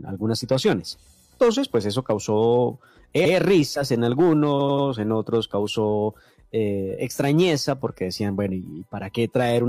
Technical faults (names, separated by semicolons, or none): repeated frames